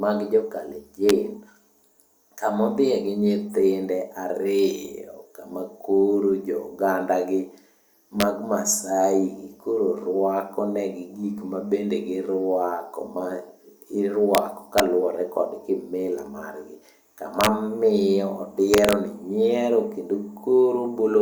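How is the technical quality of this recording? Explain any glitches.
The speech has a recurring glitch, integer overflow, at 1.09 s, 8.20–8.22 s, 14.35–14.38 s, 14.78 s, 17.41–17.47 s and 18.74–18.93 s. Loud peaks pushed the signal past the integer limit, and instead of being capped the value wrapped around to the opposite extreme. You hear harsh, snapping cracks, much sharper than clipping. The worst is around 17.4 s, where the peaks ran about 4 dB over.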